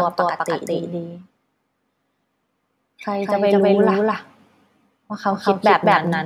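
Throughout, a doubled audio track: the speech repeats at equal loudness about a fifth of a second late, likely a second capture path, with no decay or room colour, unlike an echo.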